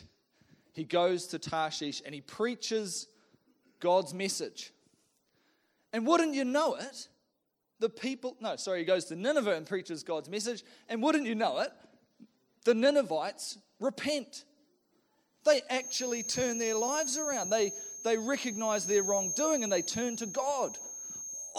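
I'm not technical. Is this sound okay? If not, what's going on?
No. Feedback whistle from 15.74 s to the end: a thin high tone at one pitch under the sound, slowly swelling and fading, likely a loudspeaker's output leaking back into the microphone.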